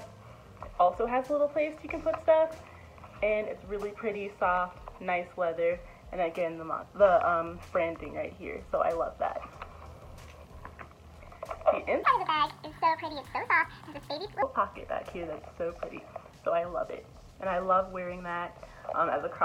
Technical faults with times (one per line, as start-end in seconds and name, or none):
12.03-14.42 section at the wrong speed